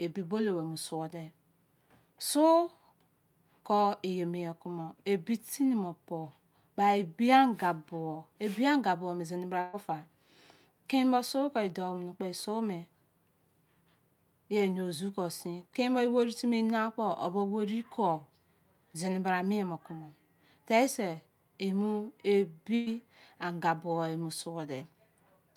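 At 9.61 to 9.76 s and again at 22.75 to 22.89 s, a burst of packet loss drops about 120 ms of speech. The receiver fills each gap (roughly 118 and 110 ms) by extending and fading the preceding sound, then resumes with that stretch missing.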